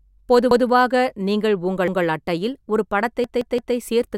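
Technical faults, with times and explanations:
0.51 to 0.68 s: repeated buffer. A chunk of about 171 ms plays once more straight after itself, with a hard join where the copy starts. New audio did not reach the output in time. The device filled the gap by replaying its last block. A block this long fits an 8192-sample buffer. It is long enough to hear as a clear stutter of the speech, not a click. Nothing seems to be skipped.
1.88 to 2.05 s: repeated buffer. Just before "அட்டையில் ஒரு", the same 171 ms block sounds twice. There is an abrupt seam at the repeat. The cause is the same late delivery, so the last block was played again. The stutter has the same length as the first one. That points to the same buffer size, and the speech afterwards resumes without a gap.
3.24 to 3.76 s: repeated buffer. After "அட்டையில் ஒரு", a 171 ms block plays three extra times, four times in all. This spans about half a second. 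Each repeat has its own hard join, giving a rhythmic stutter at a steady rate of about six per second. New audio stayed late for longer here, so the device kept recycling the same block until fresh audio arrived.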